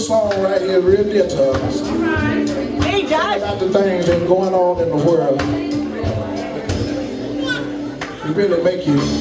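No technical faults can be heard anywhere in the clip. The sound runs without any break, glitch or disturbance.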